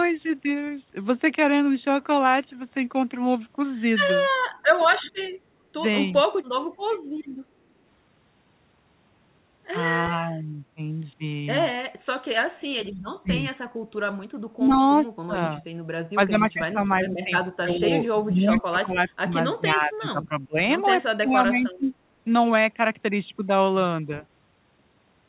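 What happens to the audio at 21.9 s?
The speech is being suppressed in double talk from 21.07 to 21.93 s, dipping by about 25 dB in pieces. The echo canceller likely mistook overlapping speech for echo.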